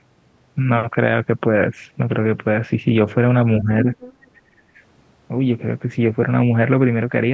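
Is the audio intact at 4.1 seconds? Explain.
No. From 3.85 to 4.27 s the other side's voice leaks through: a second, fainter voice sits roughly 10 dB below the talker. The likely cause is far-end playback from the device's loudspeaker reaching the microphone and not being fully removed by the echo canceller.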